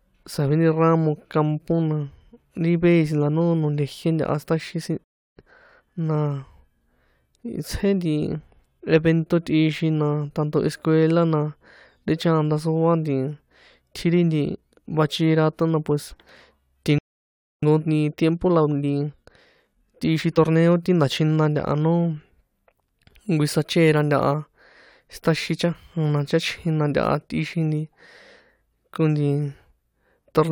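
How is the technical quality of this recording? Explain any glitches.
Two interruptions mar the recording, each a playback stall followed by a time-compressed catch-up.

Playback stalls occur at 5.04 to 5.37 s, just after "siṭaxin sin", and at 16.98 to 17.63 s. The player likely starved of data or had its thread blocked, so output stopped. The speech cuts off mid-flow into silence for 0.33 s and then 0.64 s.

Time-compressed catch-up follows each stall as the player trims its backlog by cutting and cross-fading short slices. From 5.37 to 6.01 s the speech runs at 1.5 times normal speed, and from 17.63 to 20.63 s at 1.15 times. Pitch stays normal but delivery sounds rushed.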